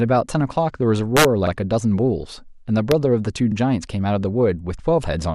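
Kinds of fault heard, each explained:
MP2 compression: Throughout the clip the speech sounds dull and carries a gurgling, granular roughness, with upper frequency bands dropping in and out. This is likely MPEG Layer II coding at a low rate, around 80 kbps. Too few bits are spread over its 32 sub-bands, so the top bands switch off and the rest are coarsely quantised. It differs from DAB burbling because it is steady and present everywhere, not a brief burst.
Integer overflow: A violent crack breaks through the loud passage from 1.17 to 1.25 s, where the signal runs about 3 dB past the numeric limit. A single snap follows at 2.92 s, where a peak only just reaches the limit. Each over-range sample wraps to the opposite sign instead of being held at the maximum. That makes it far harsher and more abrupt than clipping, which only flattens the tops of peaks.
Overlapping chunks: A short stutter occurs at 1.47 to 1.52 s and again at 3.52 to 3.56 s. 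Each time, 44 ms of audio plays twice. The two repeats are 2 s apart, which points to processing in 2-second blocks where each new block starts slightly before the previous one finished. The regular spacing and the audible doubling set it apart from a random glitch or a dropout, which would lose sound rather than repeat it.
DAB burbling: Around 2.29 to 2.30 s there is a brief burst of noise blips in single sub-bands. This comes from uncorrected bit errors, a small fraction of a percent, reaching the MP2 data and corrupting samples. It is a sudden burst at one moment. That distinguishes it from the constant dull graininess of the low-rate coding that runs through the whole clip.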